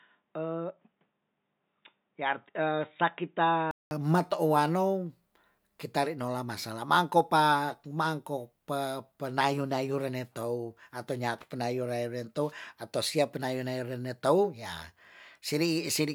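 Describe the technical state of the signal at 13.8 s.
At 13.8 s the speech signal is intact, with no dropout, clipping, glitch or other audible fault.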